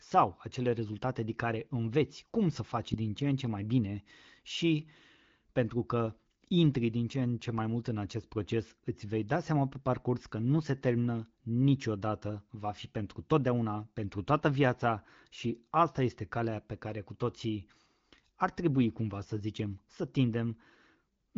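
No technical faults can be heard anywhere in this speech. It comes through the AMR wideband (HD Voice) codec at about 16 kbit/s, so it holds the light, bandwidth-limited character of that path, with nothing audible above roughly 7 kHz.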